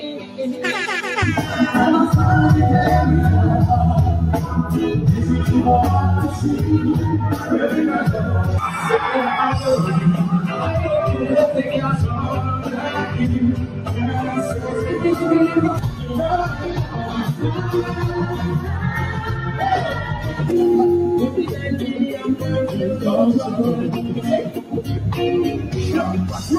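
Computer activity noise runs through the whole clip: a faint noise pulsing at roughly 500 Hz, some 35 dB below the sound, rising and falling with the computer's load rather than with the audio, as processor or graphics activity disturbs the shared ground.

A noise suppressor applied to music or sounds also acts throughout. Built for speech, it treats sustained tones, ambience and reverb as noise and pulls them down by up to about 10 dB, so attacks pass while held parts sink and the sound pumps and thins.

Sound cut by the noise suppressor occurs at 0.13–0.39 s, 13.67–13.92 s, 15.88–16.14 s, 16.83–17.35 s, 19.1–19.55 s, 19.96–20.4 s, 21.5–21.65 s and 24.46–24.84 s. At each point the suppressor mistakes the sound for noise and dips it by about 5 to 6 dB.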